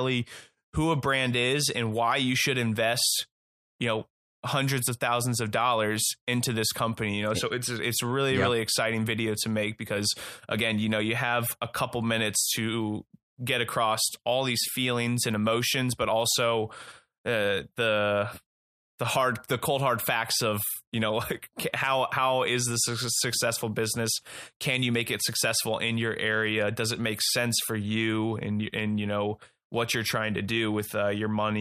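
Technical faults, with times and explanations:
No technical faults detected in this speech recording.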